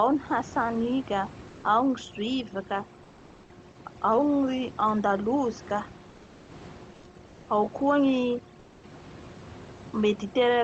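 Overdone noise removal runs through the whole speech clip. A noise reducer set far too aggressively treats every frequency band that dips near its noise estimate as noise and pulls it down hard. The room noise, about 23 dB below the speech, is reduced to near-silence dotted with twinkling specks, and the quieter parts of the voice are stripped along with it. The voice sits over a call-codec band that stops at 8 kHz.

Comfort noise in place of the background appears in three pauses: 6.09 to 6.49 s, 6.93 to 7.03 s, and 8.59 to 8.83 s. Each time, the real background gives way to a smooth, featureless hiss that drops about 3 dB, 2 dB and 4 dB respectively, then snaps back when sound resumes. The likely cause is Opus discontinuous transmission: the sender stopped sending during the gaps, and the receiver filled them with synthetic noise.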